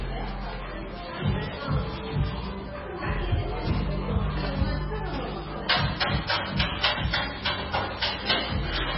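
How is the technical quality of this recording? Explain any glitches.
Technical quality is poor, with heavy damage running through the entire recording. The sound has nothing above 5.6 kHz, so it is dull and boxed-in, and the remaining detail has a watery, swirling texture, with metallic chirps on bright transients and smeared attacks. This is likely MP3 compression at a very low bitrate, around 16 kbps. Starved of bits, the encoder removes the treble outright at that cutoff and zeroes weaker frequency lines, which flicker on and off from frame to frame.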